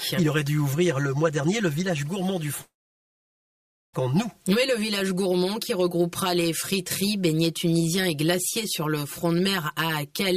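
Throughout, the sound is hollow and phasey, with evenly spaced notches starting near 100 Hz. This is channel delay (comb filtering): one channel lags about 5 ms before the mono sum.

From 2.61 to 3.95 s, a short fading buzz or hiss gives way to about 1.2 s of silence, then audio resumes with a gap, likely a long network dropout.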